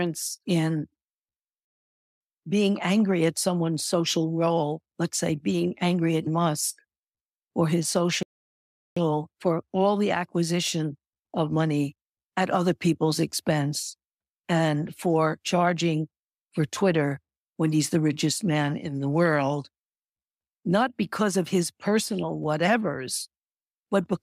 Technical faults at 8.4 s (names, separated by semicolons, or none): playback stall